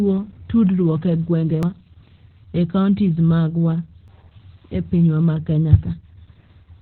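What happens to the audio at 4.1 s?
At 4.08 s, right after "e kaontis magwa", there's a skip: a short piece of audio, something like a twentieth of a second, just drops out and the two sides butt straight together with no gap of silence. That's audio missing between chunks. The likely cause is the recorder or processor handling the stream in blocks, roughly 2.5 s long here, and losing a sliver while it closes one block and opens the next, so the join sounds like a jump in the speech.

Running through that moment, and the whole clip, is heavy Opus voice compression. Nothing sits above about 4.4 kHz, so the speech is squeezed into narrowband and sounds muffled and boxy. The coarse, hoarse, slightly robotic texture points to the SILK speech coder working at a very low bitrate, around 8 kbps, where the excitation is coded so crudely that the natural grain of the voice gets smeared.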